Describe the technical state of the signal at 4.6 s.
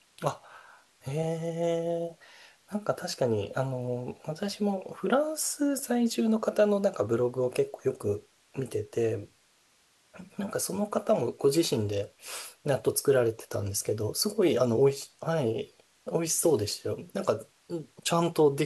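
At 4.6 s the speech signal is intact, with no technical fault present at that moment.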